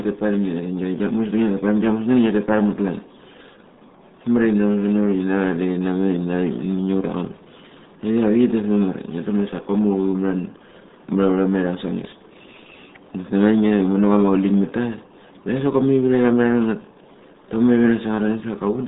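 From start to finish, the speech carries RealAudio 14.4 codec damage. Nothing above 3.8 kHz survives, and the band sits near 150 Hz to 3.7 kHz. Heavy coding leaves the voice muffled and gargly, which fits an 8 kbit/s dial-up stream.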